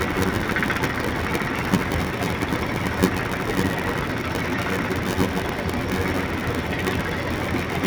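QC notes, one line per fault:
Throughout, block size mismatch (padded): a steady buzz at about 93.8 Hz sits over the sound, which plays at 0.861 times normal speed with pitch unchanged. Each block arrives short and is zero-filled to fit what sounds like a 512-sample read, leaving a gap every block.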